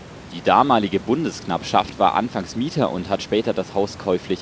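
No technical faults can be heard anywhere in the speech. Room noise sits about 22 dB below it, and the call path's G.722 coding leaves nothing above 8 kHz, as that codec normally does.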